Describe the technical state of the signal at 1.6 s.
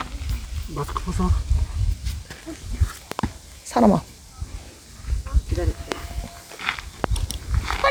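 At 1.6 s the signal is intact, with no audible technical fault at that moment.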